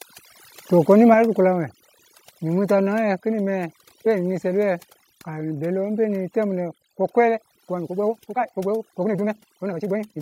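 Overdone noise removal runs throughout: the suppressor cuts individual frequency bands near its noise estimate so hard that the background becomes near silence with twinkling specks.

At 1.14 s the level of speech and background drops abruptly by about 5 dB, and at 3.18 s by about 1 dB. The likely cause is call software stepping down the microphone volume, which produces these sudden drops in level.

From 7.28 s to the end the pace jumps to about 1.71 times normal speed while the pitch holds, so the speech sounds rushed. This likely comes from a time-stretched section, where short pieces were dropped to shorten it.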